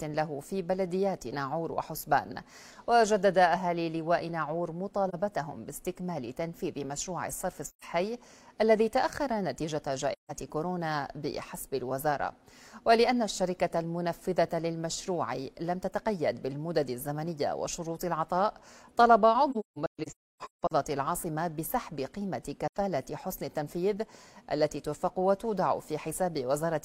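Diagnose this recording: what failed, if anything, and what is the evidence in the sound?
Brief, soft-edged dropouts break up the sound at 5.08–5.14, 7.67–7.85, 10.12–10.31 and 22.67–22.77 s, with a denser cluster from 19.51 to 20.72 s where holes are scattered over about 1.2 s, the longest run roughly 0.3 s. Each gap fades out and back in. This is AAC frame loss with muting at the codec stage. Lost frames were decoded as silence, and the overlapping transform windows smear each edge into a short fade.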